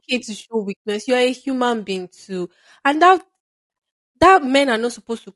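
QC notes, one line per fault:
Throughout, low-delay AAC compression: the speech sounds plainly rough and grainy, with a thin, artificial top end. This is likely AAC-ELD coding, whose short frames capture pitch detail poorly; the damage level fits a bitrate around 32 kbps.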